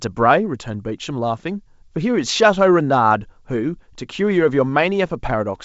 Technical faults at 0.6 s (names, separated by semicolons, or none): none